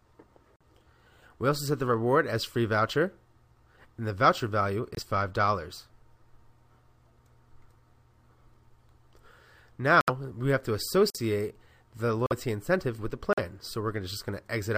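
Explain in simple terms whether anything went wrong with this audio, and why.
Something did go wrong: the audio has six short dropouts from a fault called corrupt frame muted. The file is stored in small compressed blocks called frames. A few of them were damaged, the player could not decode them, and it played silence instead. That leaves abrupt gaps of a few hundredths of a second at 0.56–0.62, 4.95–4.99, 10.01–10.10, 11.10–11.18, 12.26–12.32 and 13.33–13.39 s. The gaps do not shift the timing of the rest of the audio.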